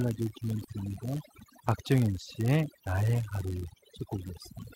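From the start, overdone noise removal is audible across the whole recording. The suppressor was set so aggressively that bands near its noise estimate were pulled down or muted outright, taking the quieter parts of the speech with them. The background drops and breaks up into twinkling specks.

Also present throughout is a block size mismatch (padded). One stage delivers blocks shorter than the next stage expects, and each block is topped up with zeros. The repeating gaps produce a steady buzz at about 99.6 Hz, the block rate, and the audio runs at 0.996 times normal speed with pitch essentially unchanged.

At 0.64 to 0.70 s there is a short concealed packet loss. Roughly 40 ms of audio failed to arrive at the decoder, so the receiver extended the preceding sound to cover the hole and then crossfaded back into the real signal. It is heard as a brief smear in the speech.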